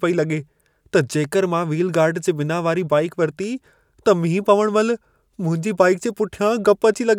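No technical faults can be heard anywhere in the speech here. There is nothing at any point that calls for a time or a value to be noted.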